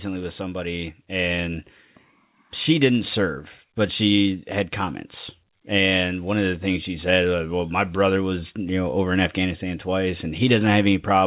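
No faults can be heard anywhere in the speech. It came through a working call path, and the band stops at about 4 kHz, which fits a narrowband G.711 A-law codec.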